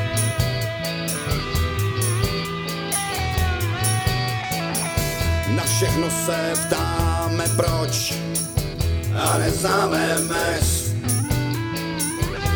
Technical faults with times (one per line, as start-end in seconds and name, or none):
none